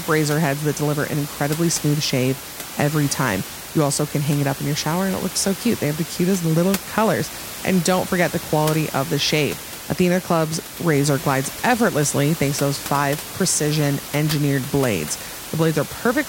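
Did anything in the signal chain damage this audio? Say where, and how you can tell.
No, nothing in the speech stood out as damage from any stage of the chain, and the room noise, about 12 dB below the voice, belongs to the recording space itself.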